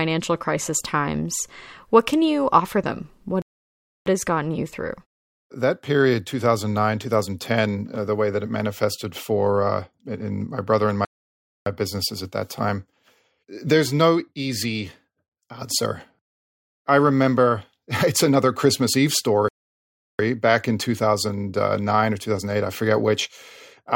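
Playback stalls occur at 3.42 s, 11.05 s and 19.48 s, cutting the speech into silence for about 0.64 s, 0.61 s and 0.71 s. The first falls after "you offer them what" and resumes at "has gotten you through", the second after "in my brother and" before "businesses at that time", the third after "it's another christmas eve" before "back in". Each gap is likely the player starving for data or its thread being blocked.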